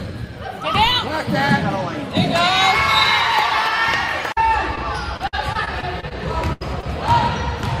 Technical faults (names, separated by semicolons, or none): short concealed packet loss; repeated packet loss (robotic sound); burst of packet loss